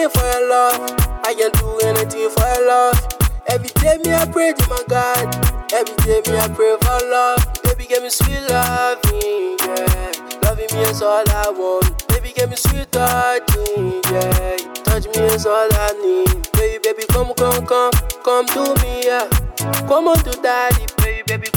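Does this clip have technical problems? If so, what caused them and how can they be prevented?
No, there are no technical problems to hear in this clip. Nothing here needs a cause traced or a prevention step.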